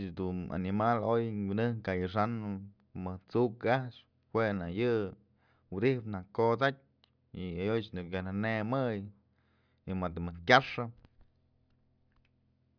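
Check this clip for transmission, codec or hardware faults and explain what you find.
Nothing to flag here: as far as I can hear, the speech comes through with no faults at all.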